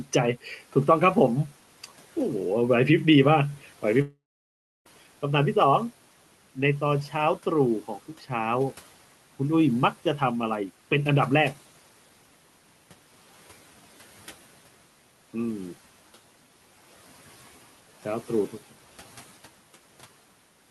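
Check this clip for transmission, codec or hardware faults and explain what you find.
One transmission fault is audible in the speech. From 4.01 to 4.87 s there is a long network dropout, the likely cause of the gap. About 0.84 s of audio never arrives. The receiver stretches the last sound into a fading buzz. Then about 0.67 s of silence follows. Speech resumes afterwards, with the lost section simply missing. The faint room noise, about 24 dB below the speech, belongs to the recording itself.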